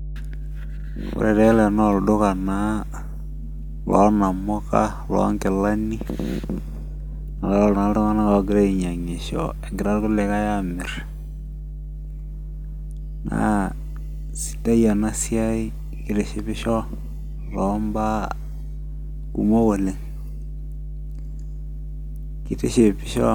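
Mains hum runs under the speech for the whole clip: a steady 50 Hz tone with low harmonics, sitting roughly 10 dB below the speech level. Power-line current is leaking into the signal path, most plausibly through a ground loop or a nearby transformer.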